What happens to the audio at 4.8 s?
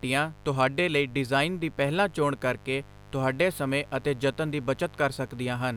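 At 4.8 s, as throughout the speech, a steady, raspy mains buzz sits well below it. Spikes twice per 50 Hz cycle spread harmonics into the kilohertz range.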